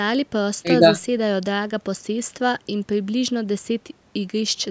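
Nothing stood out on listening to this speech, which carries the usual sound of a call's microphone processing with no content above 8 kHz.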